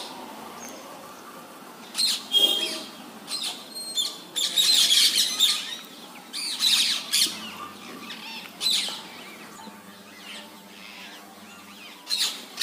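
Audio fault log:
9.56–12.20 s, channel delay (comb filtering): one side runs around 10 ms behind the other, and folding them to mono cancels a string of evenly spaced frequencies, starting near 50 Hz and repeating about every 100 Hz, so the sound goes hollow and phasey.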